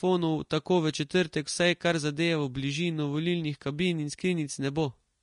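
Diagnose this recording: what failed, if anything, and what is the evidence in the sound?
The failure is at the codec stage. From start to end, the speech has nothing above 10.6 kHz. That hard ceiling fits an earlier encode near 36 kbit/s. The likely cause is low-bitrate audio saved at a high bitrate as MP3. The re-encode cannot restore the removed band.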